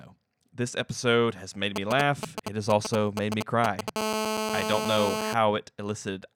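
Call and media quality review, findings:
GSM signalling bursts, 1.76–3.90 s: galloping dit-dit-dit of short 217 Hz buzzes, around speech level. Nearby 2G handset in signalling mode; audio input stage rectifying its intermittent radio bursts.

GSM phone buzz, 3.96–5.34 s: steady, hard, raspy 217 Hz buzz, harmonically rich, about 2 dB below the speech. Handset now in a call, transmitting in bursts 217 times a second; audio circuitry demodulating the 217 Hz burst envelope.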